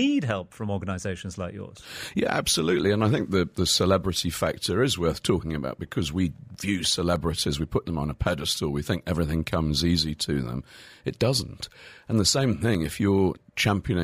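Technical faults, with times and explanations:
6.55–7.31 s, CD scratch ticks: a blemish defeats error correction once per disc rotation, so concealed samples produce six brief ticks between "talking about because we" and "we put them on".
12.44–12.90 s, CD scratch ticks: a recurring unrecoverable patch forces interpolation again, giving four regular clicks, the longest roughly two milliseconds.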